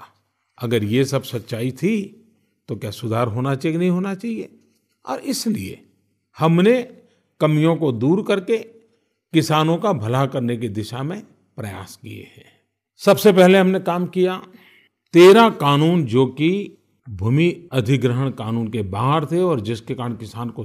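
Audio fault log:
No faults can be heard anywhere in the speech.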